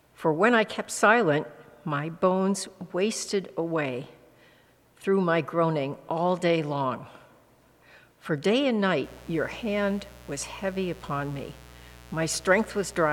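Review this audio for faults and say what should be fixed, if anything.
A mains buzz enters at 9.04 s and runs to the end at 13.13 s: a steady, raspy buzz sitting roughly 25 dB below the signal. It is built on 60 Hz, with sharp switching spikes twice per cycle spreading harmonics up into the kilohertz range. To prevent it, keep dimmers and rectifier-based supplies off the audio circuit, use properly shielded, grounded cabling, and route signal lines away from power wiring.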